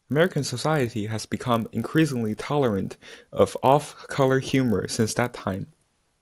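A speech recording with a resampler restarted on every block, running throughout: the conversion, which points to 24 kHz being raised to 48 kHz, treated each 20 ms block in isolation, leaving a small error at every block edge. The result is a 50 Hz buzz riding on the voice and vanishing in pauses. A spectrogram shows faint vertical stripes every 20 ms across the speech, and the waveform shows tiny steps at those boundaries.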